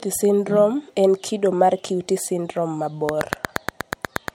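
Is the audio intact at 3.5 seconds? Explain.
No. At 3.5 seconds the speech sits inside a train of clicks running from 3.09 to 4.29 s. The clicks come at a steady pace, about 8.4 per second, and there are roughly ten of them. Each has much the same sharp shape and peaks about 20 dB above the speech. They sound like a regular ticking laid over the voice and through the gaps. The likely cause is an outside pulse source, such as nearby equipment or a faulty connection or power supply.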